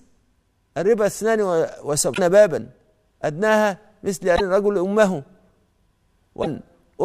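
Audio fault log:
2.13 s, 4.35 s, 6.42 s, broken MP3 bit reservoir: a garbled blip of about 55 ms as the audio jumps ahead, likely missing frames leaving two 26.1 ms frames reading another frame's bytes from the bit reservoir.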